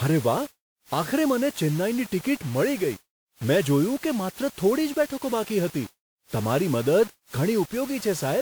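Low bit depth without dither runs through the whole speech clip. The sound was likely reduced to very few amplitude steps, consistent with about 5 bits, by rounding without any dither. Because the rounding error tracks the waveform, it turns into grainy distortion that shifts with each syllable, sitting roughly 25 dB below the signal. Quieter stretches turn rough and gritty, and the softest moments sputter between adjacent levels or fall silent.

Generation loss is also present from start to finish. The speech was likely passed through a WMA codec around seven times, each time at a bitrate that points to 96 kbit/s. Each decode and re-encode quantises again on a shifted frame grid, so noise and spectral gaps pile up. The result sounds swirly, hollow and smeared beyond what that bitrate alone would give, with softened attacks. Nothing is present above 20.1 kHz.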